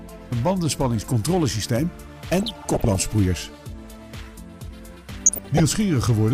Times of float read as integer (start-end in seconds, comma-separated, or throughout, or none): none